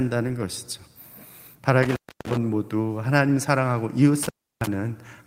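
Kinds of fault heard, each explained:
Intermittent contact: a loose connection in the cable or plug briefly breaks the signal path, so the speech drops out with crackle at each edge, once around 1.83 to 2.37 s and again around 4.23 to 4.67 s, each break lasting roughly 0.3 s.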